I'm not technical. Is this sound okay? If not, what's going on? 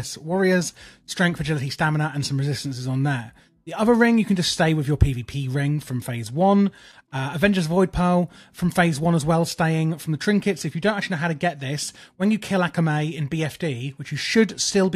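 Yes, nothing in this audio stands out as a technical fault.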